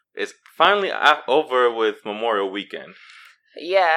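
A sudden voltage spike, likely from a switch, plug, static discharge or driver glitch, entered the signal chain between 0.65 and 0.68 s. The result is a single loud pop, standing roughly 10 dB above the speech, which continues uninterrupted beneath it.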